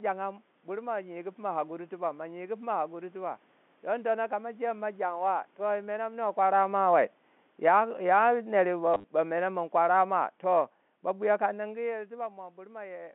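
Automatic gain falling runs from 5.13 to 11.57 s in this telephone-band speech recording: the level control judged the input too loud or its background noise too strong and eased its gain down by about 9 dB, so the voice and the room noise behind it sink together. Packet loss with last packet repeated strikes between 8.94 and 9.04 s: 80 ms of audio went missing across 100 ms, with runs up to 30 ms. Each gap was filled by replaying the previous chunk, which produces a brief robotic stutter whose buzz fits 10 ms packets.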